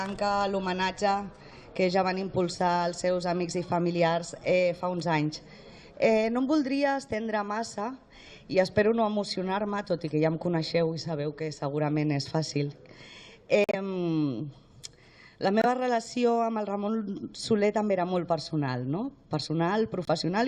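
Abrupt silent gaps at 13.64 s (0.11 s), 15.60 s (0.06 s) and 20.05 s (0.03 s) are corrupt frames muted: the decoder rejected damaged compressed frames and played silence in their place.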